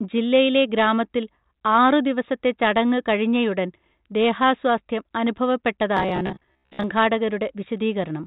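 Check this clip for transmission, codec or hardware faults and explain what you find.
One fault stands out in this speech, heard through a telephone band that stops near 4 kHz and fits G.726 ADPCM at 40 kbit/s. From 5.97 to 6.84 s the speech turns into a rigid robotic buzz at 66.8 Hz. The likely cause is repeated short buffers, each about 15 ms long, replaying over roughly half the audio. Unlike dropout gaps, there is no silence, only a fixed metallic pitch.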